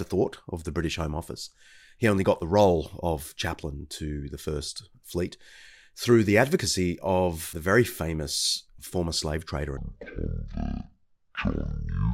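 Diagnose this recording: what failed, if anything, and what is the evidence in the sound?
From 9.77 s to the end at 12.14 s the speech drops to half speed and an octave low: stereo read as mono, interleaved left-right samples misread as one channel at format conversion.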